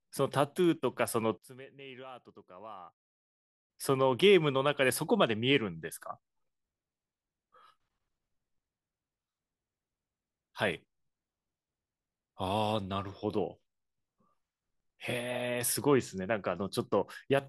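A speech clip in which, from 1.38 to 3.7 s, one channel is likely inverted in polarity, so the centred content cancels when the pair is summed to mono. The voice and low end drop by about 22 dB, leaving only a faint residue of the channel difference.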